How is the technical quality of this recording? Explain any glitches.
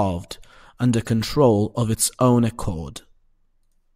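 No technical faults can be heard in this speech recording. There are no glitches to explain.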